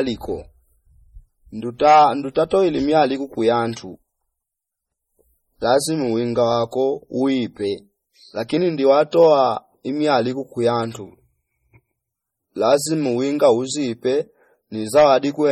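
Speech runs the full clip with heavy MP3 compression damage. It sounds watery and swirly, with metallic chirps on s sounds, smeared attacks and nothing above 18 kHz. Unlike broadband noise reduction, the warbling follows the codec's frame-to-frame switching of weak frequency lines. It is likely caused by a low bitrate encode, which fits about 32 kbps. At 9.11 s there is a pre-echo, a 16 ms smear of hiss just before a sharp attack. It comes from quantisation noise spread across the transform block, and unlike a click or reverb it leads the onset rather than following it.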